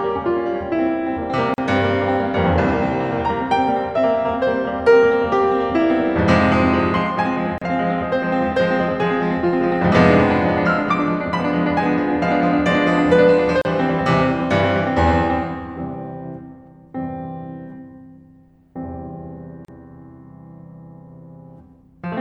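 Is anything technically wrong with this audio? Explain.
Yes. The music has a gap at a join of encoded pieces four times: at 1.54 s, 7.58 s, 13.62 s and 19.65 s, about every 6 seconds. Each gap lasts 34 to 41 ms. Separately encoded pieces were joined without trimming encoder delay and padding. The sound cuts out, its edges smeared, then resumes where it stopped.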